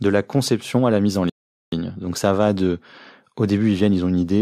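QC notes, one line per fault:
1.30–1.72 s, Bluetooth stall: the speech drops to dead silence for about 0.43 s, then resumes abruptly. The likely cause is wireless interference delaying packets until the receiver's buffer emptied. The waveform shows a flat gap and the spectrogram a clean blank column across all frequencies.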